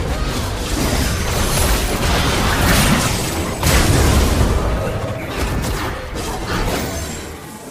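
Nothing in the signal points to a technical fault at any point: the level, continuity and timing of the audio all hold steady throughout.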